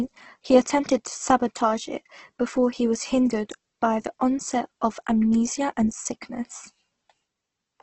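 Across the whole speech clip the sound is grainy and rough, with consonants and vowels carrying a noisy, hissy texture and nothing above about 8.2 kHz. This is likely Opus compression at a very low rate, fitting a bitrate near 12 kbps, where starved bands are filled with folded or noise-like content. On a spectrogram the energy stops at a hard 8.2 kHz ceiling, with speckled, smeared texture replacing clean harmonic lines below it.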